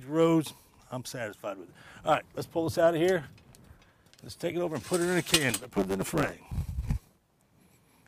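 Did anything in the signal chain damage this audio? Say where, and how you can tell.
Yes, a block size mismatch (truncated) in the buffer from 5.50 to 6.63 s: dropped block tails give a 100 Hz buzz and 1.09x speed at steady pitch, unlike clock drift.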